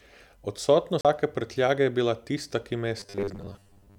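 At 1.01 s a CD skip cuts in. The laser has jumped to another turn of the spiral, so the player mutes for about 40 ms, then resumes from a different spot, and the speech picks up at "prtljage je bila tista" with a tick and a displaced continuation. On a waveform this is a short flat gap bounded by abrupt edges. A spectrogram shows a thin vertical broadband stripe where the click lands and a mismatch in the speech patterns on either side.

From 3.00 s, just after "je bila tista ki", to the end, the speech turns into a rigid metallic buzz pitched at 100 Hz that still loosely tracks the syllables. Robotic sound from repeated short buffers is the likely cause: new audio arrives too late, so the last 10 ms or so is replayed, filling most of that stretch, while real audio is dropped. A spectrogram shows evenly spaced horizontal harmonics 100 Hz apart that ignore the natural pitch contour. A zoomed waveform shows near-identical 10 ms segments repeating.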